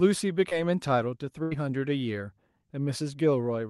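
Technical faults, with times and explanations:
0.49 to 0.53 s, short concealed packet loss: about 20 ms of the speech never reached the decoder in time, so the receiver covered the hole by extending the sound just before it, following its pitch where it was voiced and using shaped noise where it was not, then cross-fading back into the real signal. The patch lasts around 16 ms, so it comes across as a quick smear or wobble rather than a clean gap.
1.43 to 1.53 s, burst of packet loss: roughly 80 ms of consecutive audio went missing, too much for a seamless patch. The decoder kept synthesising the last sound for about 80 ms while steadily lowering its level, producing a held buzz on voiced material or a fading hiss on unvoiced material. The speech then resumes further along, so the stretch that fell inside the gap is simply absent, with the Opus call path's upper band cut off near 12 kHz.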